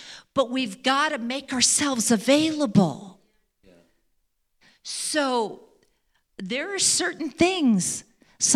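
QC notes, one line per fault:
No faults found in this speech clip. Nothing in the audio needs flagging.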